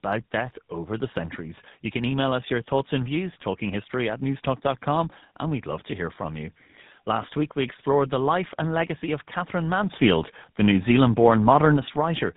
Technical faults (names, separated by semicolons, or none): tandem speech coding; sudden gain jump